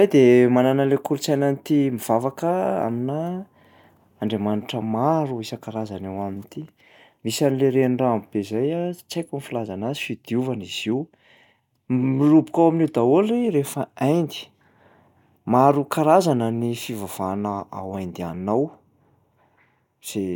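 No technical faults can be heard anywhere in the speech. There are no events to place in time, because nothing interrupts or disturbs the audio at any point.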